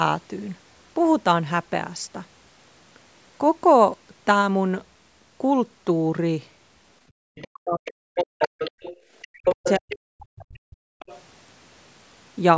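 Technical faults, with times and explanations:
7.1–7.18 s and 8.97–9.06 s, background gated by the echo canceller: the canceller clamped the microphone during loudspeaker playback, so room sound dips by about 29 dB, then about 13 dB, before returning.
7.35–7.47 s, 8.41–9.98 s, 10.55–10.59 s and 10.99–11.21 s, other side's voice leaking through: likely incomplete echo removal lets a second voice through, faint in the short scraps and much louder across 8.41–9.98 s.
7.46–8.52 s and 9.34–10.88 s, speech suppressed in double talk: both sides likely spoke at once, and the canceller turned everything down, so the talker drops very deeply, for about a second each time.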